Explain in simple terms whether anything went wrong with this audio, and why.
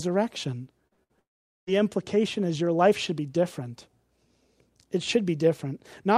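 Yes, the call lost audio on its way across the network, all within one short stretch near the start.

First came two short concealed packet losses, at 0.87 s and 0.93 s, back to back. Each time about 40 ms of sound failed to reach the receiver in time. The receiver covered each hole by stretching the sound that came just before, then blended back into the real audio. You hear a quick smear or wobble rather than a clean gap.

Then, from 1.03 to 1.11 s, a burst of packet loss removed about 60 ms in one go. The receiver again continued the last sound, letting it fade as the gap went on, so that moment turns into a brief held buzz or hiss. When the audio returns it has skipped ahead, and the part in between is simply gone.

From 1.19 to 1.69 s the sound drops out for about half a second. It trails off briefly and is then silent for most of that time, about 450 ms, before the audio picks up further on with that stretch missing. 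This is likely a long network dropout, where nothing arrived for a while and the receiver had nothing real left to play.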